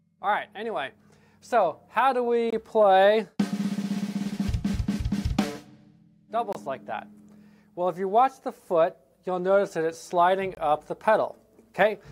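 Gap between chunks at 2.50–2.53, 6.53–6.55 and 10.55–10.57 s: the audio arrives in 4-second chunks, with a 23 ms silent hole inserted at each join, cutting the sound abruptly.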